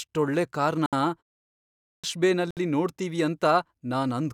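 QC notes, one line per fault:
0.86 s and 2.51 s, Bluetooth stall: a likely interference hold-up emptied the headphone buffer, so the speech drops out to silence for 66 ms, then 62 ms, before resuming.
1.47 to 2.04 s, clipped start after a pause: the output device slept through a 0.33 s pause and was slow to wake, swallowing about 566 ms so speech begins abruptly mid-sound.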